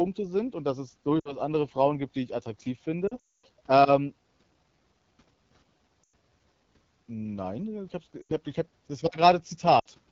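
Throughout, the speech carries the rough, raspy texture of the AMR wideband (HD Voice) codec at a low rate, near 8.85 kbit/s. The band above about 6.4 kHz is filled with shaped noise rather than real detail. That steady grain sets it apart from background hiss, which sits under the speech instead of inside it.

Lost AMR speech frames break in at 1.19 to 1.37 s, 3.07 to 3.46 s, 6.04 to 6.13 s, 8.21 to 8.33 s and 9.79 to 9.87 s. The decoder repeats the last good settings with falling gain, so the sound smears and fades rather than cutting off hard. The worst case is the 3.07 s stretch, whose longest run is about 0.24 s and sinks toward silence before rough speech returns.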